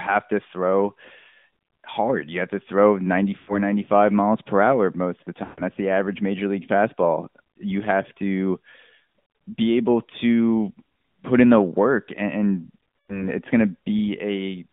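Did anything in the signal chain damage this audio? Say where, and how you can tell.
Yes. At the codec stage, AMR narrowband mobile coding confines the speech to about 150 Hz to 3.6 kHz, and its pulse-driven vocal-tract model adds a buzzy, synthetic edge that fits a mid-rate mode near 10 kbps.

At the network stage, lost AMR speech frames at 3.38–3.62 s, 5.44–5.62 s and 12.98–13.30 s trigger concealment. The decoder repeats the last pitch and tract settings at falling gain, so the sound smears and fades.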